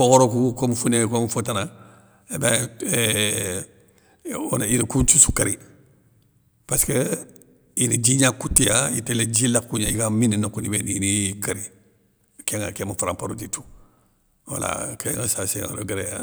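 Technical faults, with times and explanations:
8.58 s and 15.14 s, dropped buffer (overrun). At each point the speech jumps forward with no gap of silence. Around 20 ms of sound goes missing each time. The likely cause is an overrun, where the audio arrived faster than the program collected it and a buffer was overwritten before it was read. The sound on either side is then joined directly, so the waveform breaks abruptly.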